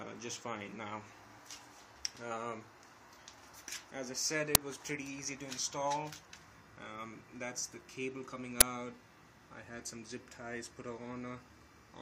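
At 4.55 s and 8.61 s, uninitialised buffers play back leftover memory instead of audio, producing short, loud cracks lasting about 5 ms and 10 ms.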